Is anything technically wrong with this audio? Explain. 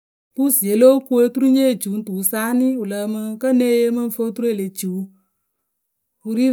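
No, nothing technically wrong can be heard in this speech clip. It opens with a smooth fade-in, the level rising gently from about 0.32 s and reaching full level at about 0.5 s, with no click or hard edge.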